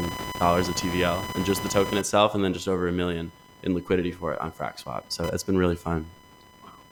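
Speech runs through the whole clip over a layer of computer activity noise: a buzzy, chirping scratch pulsing at roughly 1 kHz and sitting only about 15 dB below the voice. It follows the machine's processor, graphics or mouse load rather than the talking, as those load swings disturb the audio circuit's shared ground. A spectrogram shows a band near 1 kHz across silences too; the waveform carries fine spiky ripple between syllables.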